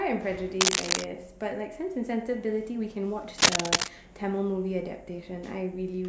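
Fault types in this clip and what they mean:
Cable scratch noise: two bursts of ragged, crackling rustle over the speech, at 0.61–1.04 s and 3.38–3.88 s, the second clearly louder, likely from a worn connector shifting contact. A spectrogram shows dense, irregular broadband streaks; the waveform shows jagged, spiky clusters.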